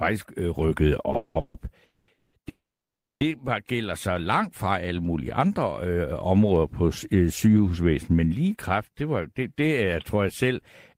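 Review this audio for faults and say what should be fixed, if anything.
From 1.11 to 1.68 s there are repeated stalls (stutter): four gaps where packets arrived late and the jitter buffer kept running dry. The receiver stretched the last sound to fill about 350 ms, the longest gap being 190 ms, so nothing is lost but the speech drags and jerks. A larger or adaptive jitter buffer would absorb that late delivery.

Right after, there are three call audio freezes, at 1.86 to 2.09 s (220 ms), 2.14 to 2.34 s (190 ms) and 2.49 to 3.22 s (720 ms). Each holds the last sound as a fading buzz or hiss; the long one decays to about 600 ms of silence before the speech resumes where it stopped. The likely cause is packets held up in transit, emptying the buffer. Fixing network congestion or prioritising voice traffic would stop these holds.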